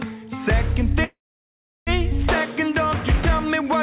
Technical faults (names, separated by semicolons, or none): call audio freeze